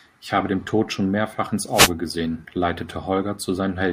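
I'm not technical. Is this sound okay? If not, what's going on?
No. At about 1.72 seconds there is a wireless microphone noise hit lasting roughly a fifth of a second, until about 1.91 seconds. It sounds like a brief swish of static over the speech. The microphone sends its sound to a receiver by radio, and for that moment the radio signal weakened, likely because reflected copies of it cancelled each other out. With less signal, the receiver's own hiss rose up.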